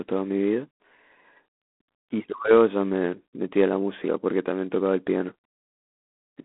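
Throughout the speech, the signal has passed through G.726 ADPCM coding with too few bits per sample to track the difference from its adaptive prediction. The result is a harsh, rasping hiss that rises and falls with the speech level, a degree of grit that fits the 24 kbit/s rate. The telephone band is narrow, roughly 250 Hz to 3.5 kHz, and nothing above 3.8 kHz survives, so the sound is dull and boxy.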